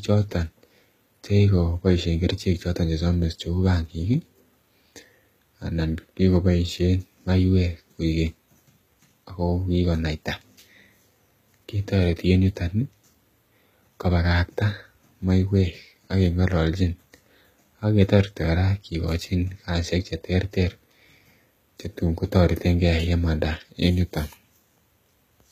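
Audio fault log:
Throughout: HE-AAC compression, plainly audible. The top end stays bright but sounds synthetic, with gritty, lispy s sounds and nothing above about 14.9 kHz. That's likely spectral band replication rebuilding the treble from copied lower bands, which fits a bitrate around 20 kbps.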